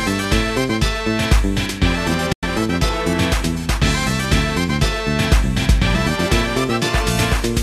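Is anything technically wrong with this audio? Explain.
Yes. At 2.32 to 2.43 s there is a digital broadcast dropout: the receiver muted corrupt frames, fading within 8 ms into 96 ms of silence, which shows as a blank column on the spectrogram.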